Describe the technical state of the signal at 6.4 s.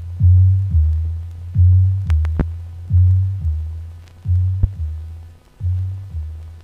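At 6.4 s the signal is intact, with no dropout, clipping, glitch or other fault audible at that moment.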